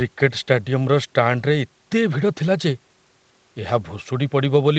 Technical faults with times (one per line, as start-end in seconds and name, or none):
none